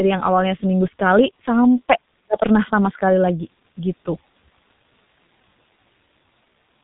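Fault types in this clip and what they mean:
G.723.1 codec: heavy low-rate coding at about 6.3 kbit/s removes everything above 4 kHz, leaving the speech muffled and hoarse with smeared consonants throughout.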